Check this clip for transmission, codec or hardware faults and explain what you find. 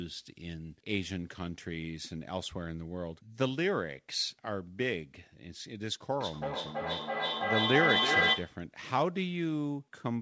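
One fault is audible: feedback echo between two devices, from 6.21 s to 8.68 s. The speech returns at a steady interval of roughly 0.3 s, and the returning copies build up instead of decaying, reaching about 5 dB above the direct speech. Two devices in the same room are on the same call. One plays back what the other's microphone sent, and that microphone picks it up again. Each device's echo canceller removes only its own playback, so the loop is never broken and the repeats accumulate. The call path itself shows no fault. Nothing is present above 8 kHz, which fits a wideband codec such as G.722.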